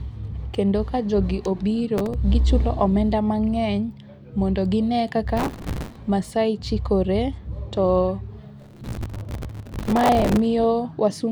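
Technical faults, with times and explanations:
1.98–2.14 s, 5.37–5.96 s and 8.60–10.46 s, processor overload crackle: speech crackles and tears right after "ka jogi", again after "omenda mang'eny mondo gine", and for nearly two seconds near the end. The processor keeps missing the deadlines for very short buffers of a few milliseconds, and each miss repeats a scrap of old audio with hard edges. The waveform shows jagged seams and repeated slivers, and the spectrogram shows dense vertical broadband streaks across each burst.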